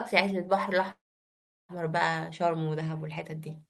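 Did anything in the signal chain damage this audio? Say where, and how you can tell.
Yes: call audio freeze, 0.91 to 1.72 s. A short fading buzz, then silence, and the speech resumes intact, likely from network delay draining the jitter buffer.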